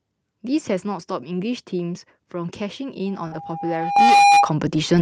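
Around 3.27 to 3.34 s there's a short concealed packet loss. About 40 ms of audio never arrived in time, so the decoder stretched the last bit of speech to cover the hole and then blended back in, leaving a brief smear or wobble. Right at the tail of that, 3.32 to 3.34 s, comes a lost packet rebuilt from error correction. The following Opus packet carried a low-bitrate copy, so there's no gap, just 20 ms that sound rougher and noisier. The same thing happens again at 4.08 to 4.10 s.

At 3.96 s the microphone volume steps up by about 10 dB in one jump. The call software decided the input was too quiet and raised it, so voice and background get louder together. A smaller step of about 2 dB follows at 4.98 s.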